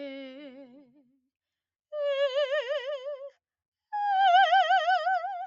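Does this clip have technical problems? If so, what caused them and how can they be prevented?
Yes. From 0.81 to 1.16 s the music sinks by up to about 13 dB for roughly a third of a second, then recovers. This is sound cut by the noise suppressor: it mistook sustained musical content for background noise and pulled its level down. The band limit near 8 kHz fits the call's Opus path and is expected. To prevent the dip, switch the noise suppressor off or use a music mode when sending music.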